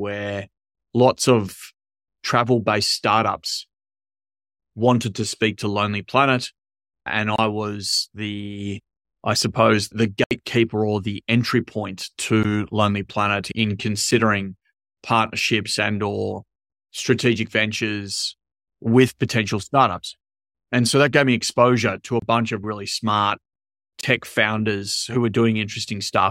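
Block of digital silence at 7.36 to 7.38 s, 10.24 to 10.31 s, 12.43 s (after "or the entry point"), 14.11 s, 22.20 to 22.22 s (between "me exposure to a" and "bunch of really smart"), and 24.01 to 24.03 s (before "founders who were"). Each time the speech drops abruptly to silence and returns with no fade. The output buffer likely went unfilled, and the repeated 23 ms gaps fit a 1024-sample buffer. The short 8 and 13 ms blocks sound like ticks, the 23 ms ones like pops, and the 70 ms block at 10.24 s like a brief hole.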